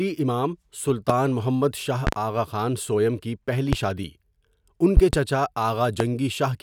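Sharp, loud pops cut through the speech five times: a single pop at 1.10 s, a pair between 2.07 and 2.16 s, a single at 3.73 s, another pair from 4.97 to 5.17 s, and a slightly quieter single at 6.00 s. Most jump roughly 20 dB above the speech, which carries on beneath them. These are loud pops, likely sudden voltage steps from a switch, static discharge or driver glitch entering the signal path.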